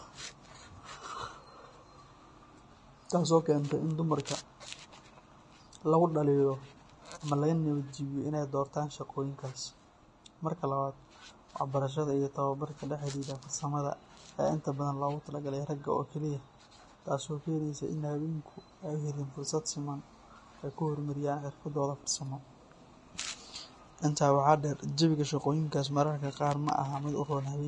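Vorbis compression runs throughout the speech, and the sound is plainly damaged by it. Nothing comes through above about 10.6 kHz, so the top octave is simply missing. Below that edge the treble is quantised so coarsely that fine detail turns into hiss of similar energy, making consonants grainy and blurring their onsets. The likely cause is a low-quality Vorbis encode, with damage at this level pointing to a bitrate around 31 kbps.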